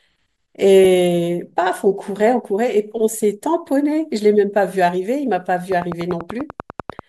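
A train of clicks runs from 5.72 to 7.00 s: around fifteen near-identical pulses at a steady 10.2 per second, peaking roughly 10 dB above the speech. The regular ticking, likely from electrical interference or a faulty connection or power supply, sits on top of everything, pauses included.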